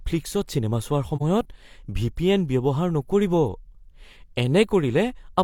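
A speech clip with one dropout from about 1.16 to 1.22 s, an AAC frame loss with muting. Roughly 43 ms of audio, which fits a single lost frame, was replaced by silence, and the overlapping windows fade the sound out and back in, leaving a brief dip.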